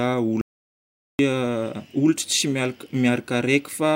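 At 0.41 s the speech cuts out abruptly in mid-flow and returns at 1.19 s, an audio dropout to silence lasting about 0.78 s. The input was likely lost for that stretch while recording carried on writing silence. What separates this from a natural pause or a noise gate closing is that the gap holds silence with no room tone or fade, and the speech on either side is chopped rather than finished.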